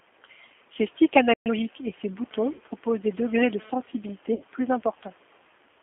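Throughout, the speech carries the sound of the G.729 codec at 8 kbit/s, here the lighter G.729A variant. The audio is confined to roughly 250 Hz to 3.4 kHz, so the top end is missing and the low end is thin. Because the decoder rebuilds each 10 ms frame from a vocal tract filter, a pitch predictor and a handful of pulses, the voice has a plainly audible rough, slightly synthetic texture.

At 1.34 s the sound cuts out mid-flow and stays silent for about 120 ms, until 1.46 s. This is a playback stall: the output had nothing to play, likely because the player's buffer ran dry or its thread was held up, and the audio resumes where it left off.

From 1.46 s to 1.58 s, just before "et ses", the player recovers the lost time with time-compressed catch-up, running at twice normal speed. It drops short segments and cross-fades across the joins, so the pitch stays natural while the delivery sounds rushed until it settles back to real time.

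At 2.53 s and again at 4.34 s there is VoIP packet loss concealed by the speech codec, each gap about 60 ms long, which fits two lost packets. With no data arriving, the decoder extends the last pitch and filter state with falling gain, so the voice smears into a buzzy tone or coloured noise that fades. Because each frame builds on the one before, the sound stays weak or distorted briefly after real data resumes, at about 2.62 s and 4.41 s respectively.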